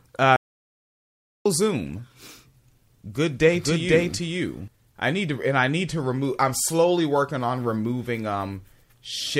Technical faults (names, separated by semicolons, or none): audio dropout to silence; doubled audio track